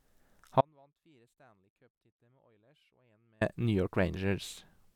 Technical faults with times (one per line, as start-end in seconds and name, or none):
0.61-3.41 audio dropout to a faint residue